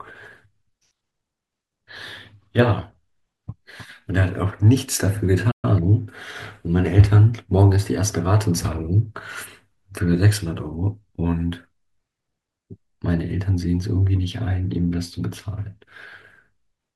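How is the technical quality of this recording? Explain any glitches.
The speech has one glitch. A playback stall from 5.51 to 5.65 s silences the audio mid-flow, likely because the player ran short of data or its thread was blocked, before it resumes.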